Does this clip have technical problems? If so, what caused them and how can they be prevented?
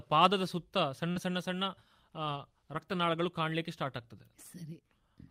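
Yes, there are two related network problems. First, a short concealed packet loss at about 1.11 to 1.17 s. Around 40 ms of audio never reached the decoder in time, so the receiver patched the hole by extending the sound just before it and then blending back into the real signal. You hear it as a brief smear or wobble right there. A steadier connection, or a slightly deeper jitter buffer so late packets still arrive in time, would prevent it.

Second, a lost packet rebuilt from error correction, at 1.15 to 1.17 s and again at 2.73 to 2.79 s. The first is 20 ms, overlapping the tail of that concealed stretch, and the second is 40 ms, which fits two lost packets. Instead of leaving a gap, the decoder played the low-bitrate backup copies carried in the following packets, so those moments come through a bit rougher and noisier than the surrounding audio. Reducing the packet loss itself, for example by moving to wired or less congested Wi-Fi, keeps the decoder from having to lean on those degraded copies.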